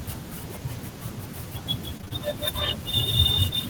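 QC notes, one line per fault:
1.97–2.20 s, repeated packet loss (robotic sound): a few short dropouts in quick succession, the longest about 19 ms, with nearly half the span patched by repeating the preceding sound. The result is choppy. The spectrogram shows smeared, repeated harmonic slices with abrupt vertical seams, and the waveform shows copied cycles.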